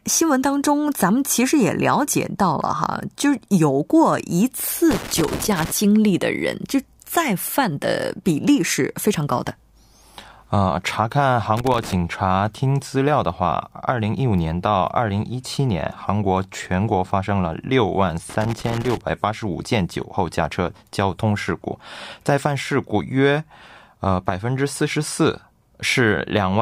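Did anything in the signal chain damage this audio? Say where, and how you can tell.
Yes. Loose connector crackle at 4.91–5.71 s, 11.57–11.93 s and 18.30–19.01 s places the damage in the analogue wiring. A worn or dirty contact is making and breaking intermittently, chopping the speech, so each burst sounds like irregular scratching.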